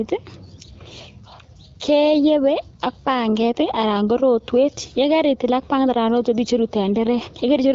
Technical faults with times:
none

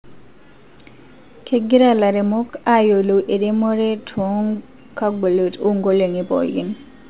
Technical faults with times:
none

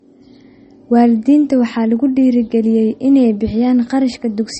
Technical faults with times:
0.00-4.59 low-bitrate audio saved at a high bitrate

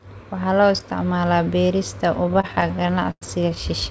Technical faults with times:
2.26-3.58 repeated stalls (stutter)

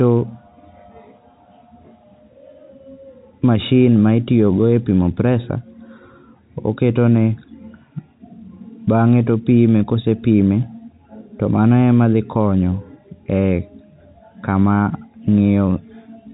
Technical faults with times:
none

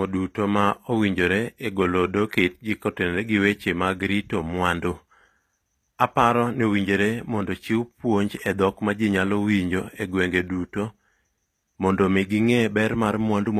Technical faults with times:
0.00-13.59 HE-AAC compression

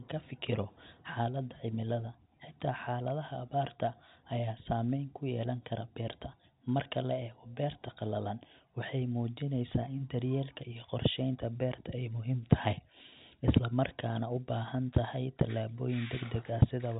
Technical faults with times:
none

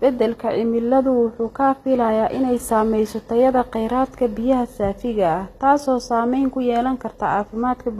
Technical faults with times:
0.00-7.99 HE-AAC compression

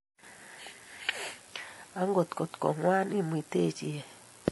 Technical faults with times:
0.00-4.51 low-bitrate audio saved at a high bitrate

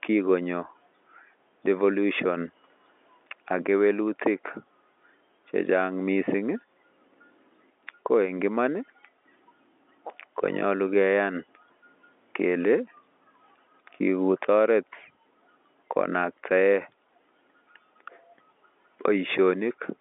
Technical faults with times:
none

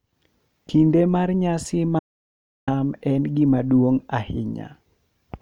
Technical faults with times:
1.99-2.67 audio dropout to silence

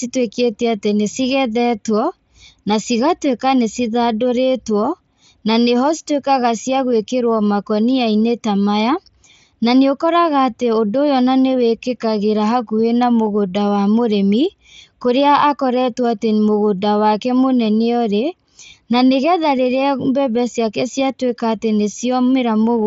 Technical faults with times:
none

